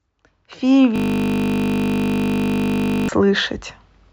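At 0.96 s the speech stops moving and a system hang loop takes over until 3.09 s. The machine or its audio driver froze, but the sound hardware kept playing the same little ring buffer over and over. Each pass is only 20 ms long, so it repeats 50 times a second, well over a hundred times in all. Because the loop is so short, you don't hear a stutter. It's a steady, flat buzz pitched at 50 Hz, and then normal audio picks up again.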